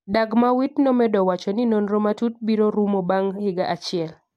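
It's a short speech clip with one technical fault worth flagging: a single sharp click at about 0.82 s. It sounds like dropped samples, where the stream skips forward by roughly one sample, so the waveform jumps straight from one value to a later one. That's far too brief to take out any of the audio itself. All you get is the tick, which would show up as a thin vertical line on a spectrogram.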